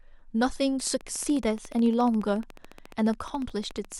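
Speech, with a train of clicks running from 0.80 s to 3.93 s. The pulses repeat regularly at about 14.1 per second, roughly fifty in all, each about as loud as the speech. They tick through pauses too. Likely cause: interference from nearby equipment or a faulty connection or power supply.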